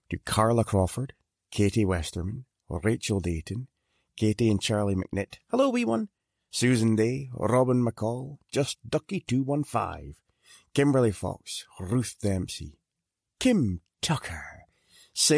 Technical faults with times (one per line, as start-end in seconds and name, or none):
none